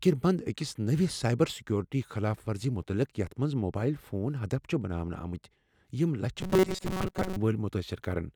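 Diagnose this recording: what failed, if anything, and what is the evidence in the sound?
At the driver or buffer stage, new audio likely stopped arriving in time, so the software kept replaying its last short buffer while the real signal went missing for most of that stretch. From 6.41 to 7.36 s, just after "یِم لچھِ", the speech collapses into robotic sound from repeated short buffers: a rigid, metallic buzz fixed at 188 Hz that only loosely tracks the words. That pitch implies a loop about 5.3 ms long.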